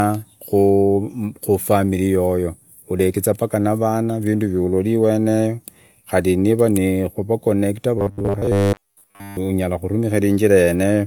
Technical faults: robotic sound from repeated short buffers

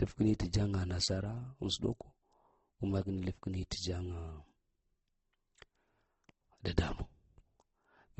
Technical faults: transcoding between lossy codecs

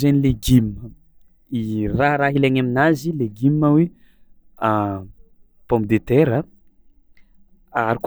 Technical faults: drift correction step

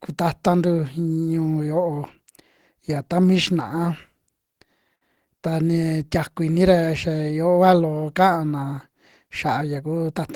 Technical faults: short stall from a late packet

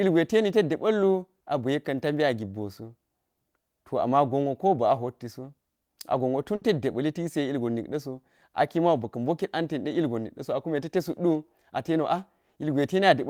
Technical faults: burst of packet loss

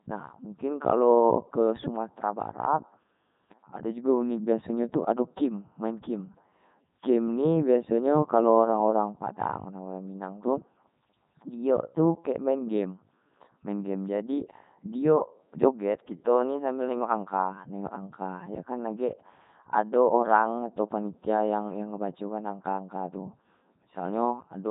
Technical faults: Codec 2 vocoder

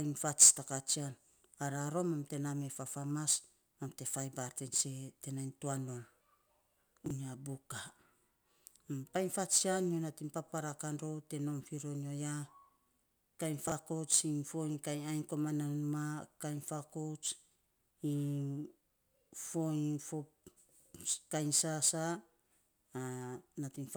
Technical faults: chunks out of order

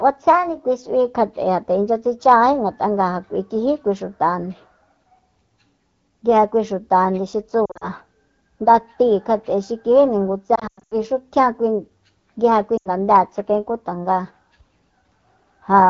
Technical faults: lost AMR speech frames

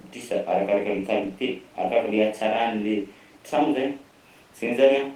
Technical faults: none

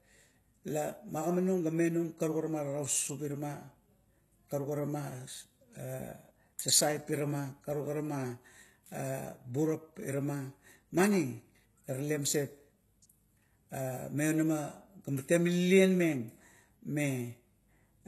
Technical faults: HE-AAC compression

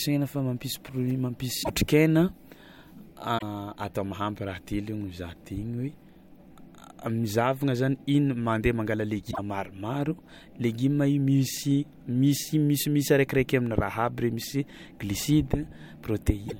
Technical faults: damaged data in a compressed stream

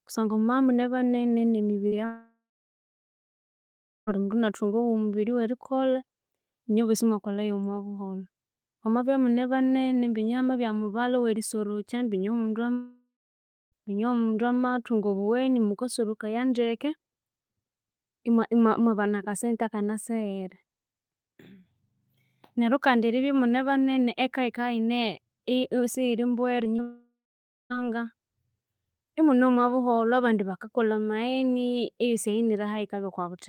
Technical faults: short concealed packet loss; long network dropout

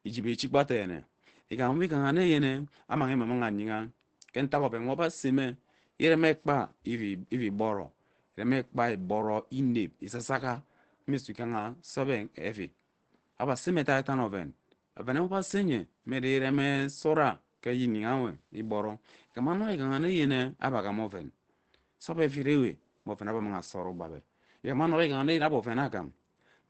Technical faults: Opus compression

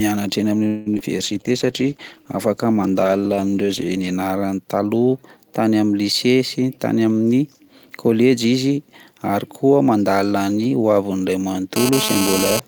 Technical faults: call audio freeze; short concealed packet loss; call bitrate drop; jitter buffer speed-up; GSM phone buzz

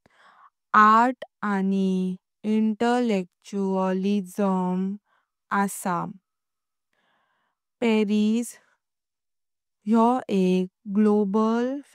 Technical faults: none

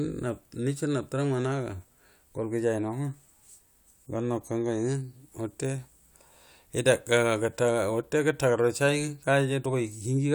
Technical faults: none

